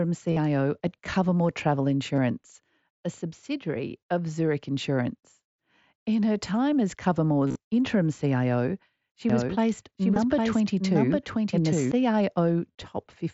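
Short buzzy stretches, each ending in a small warble as real audio returns, fall at 0.31–0.37 s, 2.16–2.18 s, 7.47–7.56 s just after "her time as", 10.14 s and 12.72–12.75 s. This is concealed Bluetooth headset packet loss: missing packets were filled by continuing the waveform with the best-matching recent stretch.

From 9.30 to 11.92 s a second full-band copy of the sound trails roughly 0.7 s behind, at about the same level. It has no room colour and starts and stops abruptly. This doubled audio track likely comes from a slower second capture path or an edit holding two out-of-step copies.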